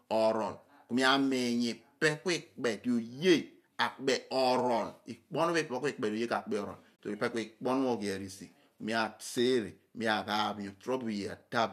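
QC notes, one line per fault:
6.98 s, AAC frame loss with muting: the decoder replaced lost frames with silence, and the overlapping windows fade the sound out and back in, leaving a soft-edged hole of about 30 ms, which fits three lost frames. The waveform narrows smoothly to nothing, and the spectrogram shows a short vertical gap across all frequencies.
9.38–9.40 s, loud pop: a single sharp pop sits on top of the speech, which carries on underneath, and it peaks a few dB above the surrounding sound. Its likely cause is a sudden voltage step or pulse from a plug, switch, static or driver glitch. The waveform shows a 20 ms spike, and the spectrogram shows a bright vertical stripe.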